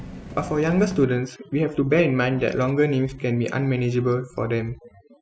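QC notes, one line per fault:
1.04–5.21 s, overdone noise removal: the room noise, about 23 dB below the speech, is cut far down from here on, leaving near silence with twinkling specks, and the voice's quieter bands are gated with the noise. A spectrogram shows isolated bright dots scattered across a dark background, and holes punched into the speech's weaker harmonics.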